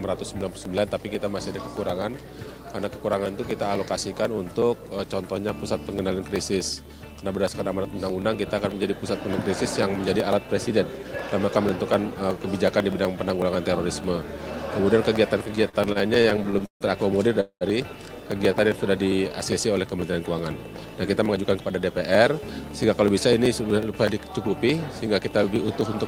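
A background task blocking the USB bus or audio driver every 0.124 s causes periodic USB or driver dropouts from 0.16 s to the end of the audio: a sliver is skipped each time, heard as regular ticks about eight times a second whenever there is signal. Between 15.55 and 16.84 s, packets repeatedly arrived late and the jitter buffer emptied 14 times, producing repeated stalls (stutter). The last sound is stretched to cover 352 ms in all, the longest wait 149 ms, so the audio drags and stutters with nothing lost. From 17.41 to 17.64 s, a call audio freeze holds the sound as a fading buzz for 203 ms, with about 90 ms of it silent, before the audio resumes where it stopped. The likely cause is packets held up in transit. A jitter buffer slow-down between 18.69 and 19.33 s repeats pitch periods to rebuild the buffer's reserve, adding 69 ms, so the audio runs at 91% speed with drawn-out sounds at unchanged pitch. 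Then a jitter buffer speed-up from 21.27 to 22.70 s trims excess buffered audio by removing short pitch-period pieces, about 150 ms in total, so the sound runs at 110% speed and feels hurried.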